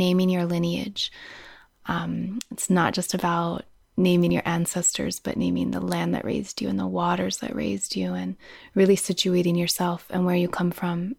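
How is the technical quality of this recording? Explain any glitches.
The recording has one glitch, a single tick in the speech.

At 4.30 s, between "not just about naming" and "your ancestors but naming", there is a block of digital silence about 2.9 ms long, which fits a 128-sample buffer that went unfilled in time. The signal drops straight to zero and returns with no fade, so the two hard edges merge into one brief tick. On a waveform it appears as a tiny flat line; on a spectrogram, as a thin vertical broadband stripe.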